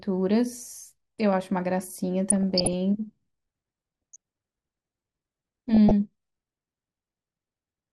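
Throughout, the speech sounds dull and gurgling, with a granular edge and upper frequencies flickering in and out. This is MP2 compression, likely at a rate that fits around 80 kbps, where too few bits switch off upper sub-bands and coarsely quantise the rest.

From 2.30 to 2.73 s, 4.13 to 4.16 s and 5.69 to 5.91 s, short blips of noise break over the sound. This is DAB burbling: a small share of bit errors slips past error correction, putting wrong samples into single sub-bands.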